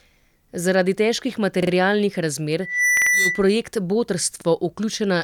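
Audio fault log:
1.63–1.72 s, 2.97–3.11 s, 4.41–4.46 s, repeated buffer: fresh audio failed to reach the output in time, so the device replayed its last block, roughly 46 ms each, which fits a 2048-sample buffer. That block sounds two extra times at the first spot, three at the second (inside the squeal) and once at the third. Each repeat joins hard to the last, giving a quick stutter rather than a gap, since no sound goes missing.
2.60–3.49 s, loudspeaker feedback squeal: a microphone is picking up the loudspeaker it drives, and around 2 kHz the loop gain climbs past unity. That one frequency feeds on itself, swelling over roughly 0.3 s into a steady high whistle that sits about 5 dB above the speech. The squeal stops near 3.49 s.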